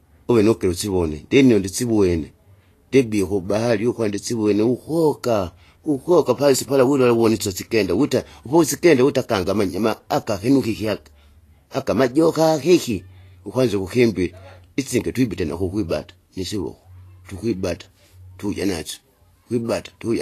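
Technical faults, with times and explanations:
throughout, Vorbis compression: the speech sounds hissy and grainy, with dulled treble and smeared consonant onsets, likely from low-bitrate Vorbis coding at around 35 kbps. A spectrogram shows a hard upper cut-off and noisy, speckled patches where fine high-frequency detail should be.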